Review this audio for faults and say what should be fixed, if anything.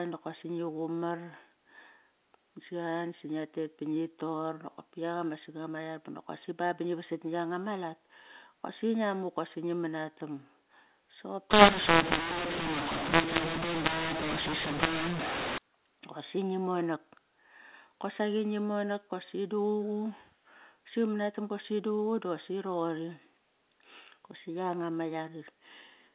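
From 11.51 s to 15.58 s, the speech turns harsh and distorted. This is a mu-law and A-law mix-up. The audio was coded as A-law but decoded as mu-law. The two logarithmic scales map the same 8-bit codes to different levels. Some samples come out too loud, others too quiet. The quietest ones are raised well above silence, so gaps fill with noise. Before and after, the A-law telephone audio at 8 kHz decodes as expected. To prevent this, carry the G.711 law with the stream and check it before decoding.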